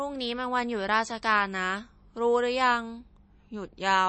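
Throughout, the speech has nothing above 8.3 kHz and a watery, swirling texture, likely MP3 compression at a low bitrate around 32 kbps, starving weak frequency lines.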